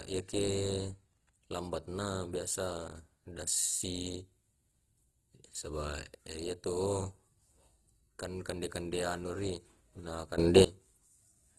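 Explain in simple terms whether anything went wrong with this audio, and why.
Opus compression affects the whole recording. The speech sounds rough and grainy, and nothing is present above about 12.2 kHz, which takes away some crispness. This is likely because the audio was squeezed through the Opus codec at a low data rate. To save space, the codec keeps only the overall loudness of each frequency band and fills in the fine detail with approximations, so clear sounds come out noisy.

A sudden gain jump occurs from 10.38 to 10.65 s, just after "kande anu ri na". The speech and the background noise both get abruptly louder together, with no smooth rise, and then drop back at the end of that span. The likely cause is a volume change applied in one instant instead of being eased in, so the level steps up between one moment of sound and the next.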